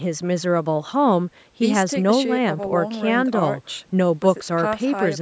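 No technical faults are audible.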